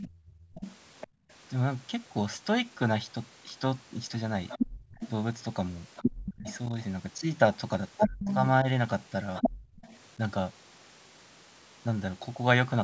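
From 0 to 1.07 s, a second voice sits under the talker, about 15 dB quieter. This is the other side's voice leaking through, likely from a loudspeaker the echo canceller did not fully cancel out of the microphone.

Between 0.1 and 1.29 s, the room sound dips hard, by up to about 25 dB. In total, well over half a second is lost. This is background gated by the echo canceller. It clamped the microphone while the loudspeaker played, then let go.

From 4.49 to 9.99 s, the second voice returns. Now it is roughly as loud as the talker. Again, leakage of the far side is the likely cause.

At 4.76 to 4.91 s, the background drops out briefly, by about 22 dB, for around 150 ms. The canceller gated it once more.

Between 6.4 and 8.66 s, the talker's own voice dips in pieces. The drops reach roughly 25 dB and add up to about a third of a second. Both sides are talking at once here. This is speech suppressed in double talk. 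The canceller likely could not tell the talker from the echo, so it turned both down.

At 9.54 to 9.76 s, the background gates again, by about 25 dB, for around 200 ms. Throughout, the call's microphone processing limits the band to nothing above 8 kHz.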